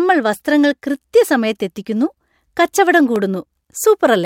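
At 3.16 s, just after "വസ്ത്രങ്ങൾ കൃത്യസമയത്ത് എത്തിക്കുന്നു കച്ചവടം", a repeated buffer is heard as a single sharp click in the speech. Fresh audio failed to reach the output in time, so the last block of about 1.45 ms, which fits a 64-sample buffer, played a second time. The piece is too short to register as a stutter. Unlike a dropout, there is no silent gap, only a hard seam where the duplicated slice rejoins the speech.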